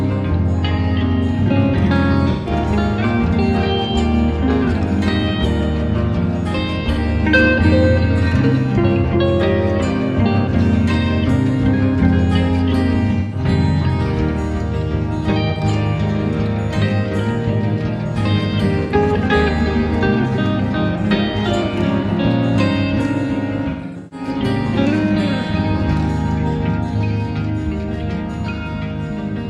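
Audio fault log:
2.32–2.51 s: AAC frame loss with concealment, a smeared, noisy patch where the decoder repeats the last good spectrum with scrambled phase, about 128 ms lost.
6.92 s: same fault, a brief 43 ms phasey blip, consistent with one missing frame.
13.19–13.39 s: same fault, another 128 ms smear.
15.50–15.61 s: same fault, 85 ms of smeared fill.
18.83–18.93 s: same fault, 85 ms again.
23.69–24.27 s: same fault, 341 ms of gaps scattered over 427 ms. The longest stretch is around 150 ms.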